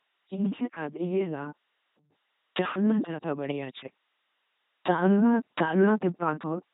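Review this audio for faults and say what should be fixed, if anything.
Throughout, the speech sounds like an LPC-10 vocoder: buzzy and robotic, each moment forced fully voiced or hissy, nothing above 3.8 kHz, consistent with a 2.4 kbit/s link. Route it through a modern wideband codec with enough bitrate instead of LPC-10.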